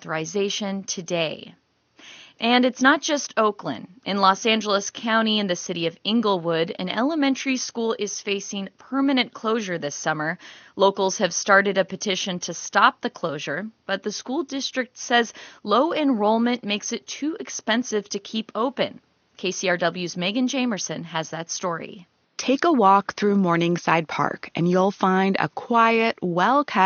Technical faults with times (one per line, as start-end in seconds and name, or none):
none